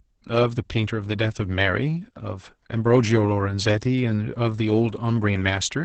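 Throughout, Opus voice compression in SILK mode, consistent with roughly 10 kbps, caps the band at 8 kHz and codes coarsely, leaving the speech muffled, hoarse and slightly robotic.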